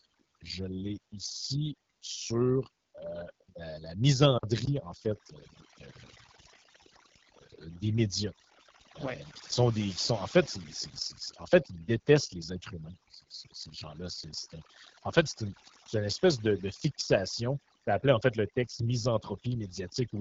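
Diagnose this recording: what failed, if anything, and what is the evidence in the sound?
Overdone noise removal in call processing runs throughout: the background drops and breaks up into twinkling specks, and quiet voice parts vanish with it.

AMR wideband (HD Voice) codec damage runs throughout: speech is plainly rough and raspy with nothing above 7.5 kHz, which points to a low 8.85 kbit/s mode, not simple band-limiting.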